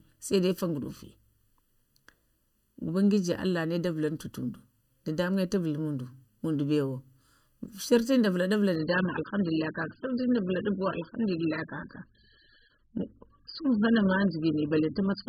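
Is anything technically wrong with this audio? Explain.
Yes. Throughout, channel delay causes comb filtering: one channel lags the other by under a millisecond, so the mono sum cancels at evenly spaced frequencies starting around 700 Hz. The speech sounds hollow, and a spectrogram shows fixed dark horizontal bands.

From 8.76 s to the end, the adaptive stream switches to a lower bitrate, likely a drop from about 96 to 8 kbit/s. The sound turns abruptly dull, and the spectrogram shows nothing above 5.1 kHz.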